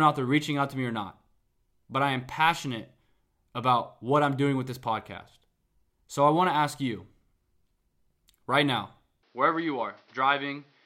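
At 9.23 s, after "right now", the speech abruptly dulls, with nothing above 6.1 kHz, and a new faint background noise appears: likely an input switched to a poorer device, not plain filtering.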